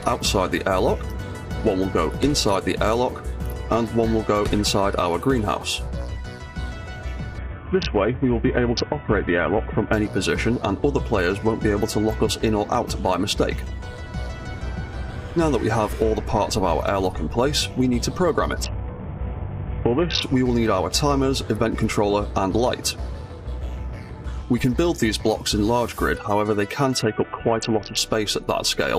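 A congested Bluetooth link forced three SBC bit pool drops, at 7.38–9.93 s, 18.63–20.23 s and 27.02–27.97 s, consistent with the bit pool falling from 31 to 5, near 50 kbps. Each time, the audio loses its treble and turns gritty until the rate recovers.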